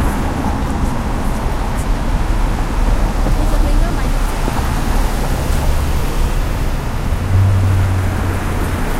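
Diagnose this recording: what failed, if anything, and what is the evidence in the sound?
No failure at any stage.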